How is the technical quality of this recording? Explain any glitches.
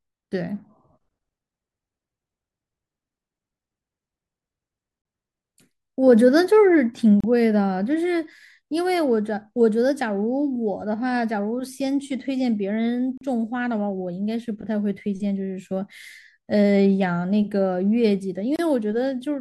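The speech has three brief dropouts. Short silences with smeared edges open at 7.20 s (about 32 ms), 13.18 s (about 37 ms) and 18.56 s (about 29 ms), and the speech then resumes where it stopped. These are gaps at a join of encoded pieces: separately encoded sections were joined untrimmed, leaving encoder start delay and final-frame padding in the audio.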